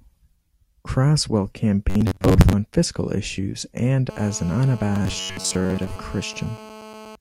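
At 1.9 s the speech turns into a rigid, metallic buzz pinned at about 94 Hz, lasting until 2.53 s. That's the robotic sound from repeated short buffers. The likely cause is audio arriving too slowly, so the software keeps replaying a slice of roughly 10.7 ms (one over 94 Hz) to fill the gaps, with about half of what you hear being repeats. The speech still loosely follows its shape.

From 4.10 s to 7.16 s there's a hard, raspy buzz at about 217 Hz, full of harmonics and about 19 dB below the speech. That's GSM phone buzz: a nearby 2G phone bursting 217 times a second, with the audio circuit rectifying the radio pulses. It holds steady the whole stretch, which fits a phone on a call. The robotic effect returns underneath it from 4.96 s to 5.99 s, again at about 94 Hz with about half the audio repeated.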